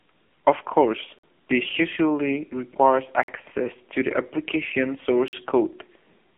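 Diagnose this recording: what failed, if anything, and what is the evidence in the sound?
Codec stage: this has been through the AMR narrowband mobile codec. Nothing gets past 3.8 kHz, and the buzzy, synthetic speech points to a very low bitrate, around 6.7 kbps.

Playback or buffering stage: there's a gap between chunks, a hole of about 48 ms every 2 s. The first is at 1.19 s, just before "this usually requires". The next is at 3.23 s, between "course this usually requires" and "to the application". The last is at 5.28 s, right after "to the application". The chunks are joined with silence between them.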